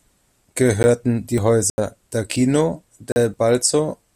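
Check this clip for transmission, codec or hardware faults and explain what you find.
Two faults affect the speech: blocks of digital silence and audio missing between chunks.

Block of digital silence at 0.83 s, 1.70 to 1.78 s and 3.12 to 3.16 s: most likely the output buffer wasn't filled in time, so samples were zeroed. The signal drops abruptly to silence and returns, giving a click at 0.83 s and short holes of 80 ms and 40 ms.

Audio missing between chunks at 1.38, 2.36 and 3.34 s, one second apart: roughly 20 ms is likely lost each time the recorder switches from one one-second chunk to the next. The two sides are butted together, so the speech skips at each joint.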